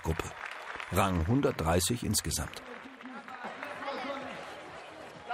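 At 2.87 s the level suddenly sags by about 6 dB and stays down until 3.44 s, roughly half a second. That's a one channel drop-out, likely: one side of the stereo pair went missing, so the mono sum lost half of what both channels shared.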